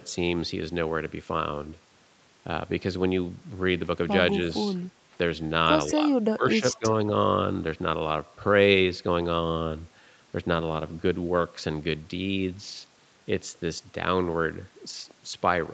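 At 4.75 to 4.82 s, a faint delayed copy of the speech slips through. It trails the original by about 181 ms and sits far below it, roughly 35 dB down. It is brief, a scrap rather than a stretch. This is an echo leak. The likely cause is a far end on loudspeaker whose echo canceller missed part of what its microphone caught, so that remnant travelled back down the line.

From 5.91 to 6.85 s, the speech dips in pieces. The deepest cuts reach about 20 dB. Together the dropped parts add up to roughly 0.7 s. The sound drops while both sides talk at once. This is speech suppressed in double talk. The echo canceller likely could not tell the near talker from the loudspeaker echo, so it turned both down together.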